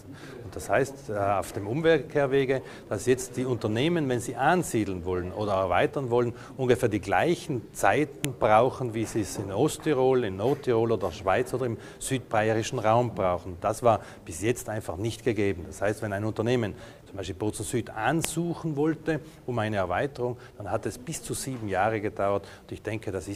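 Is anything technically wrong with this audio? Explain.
Yes. Sharp, loud clicks at 8.25 s and 18.25 s are a file header played as audio: a header left in when pieces were joined, its bytes read as samples. The exact 10 s spacing and indifference to the surrounding signal distinguish it from random dropout clicks.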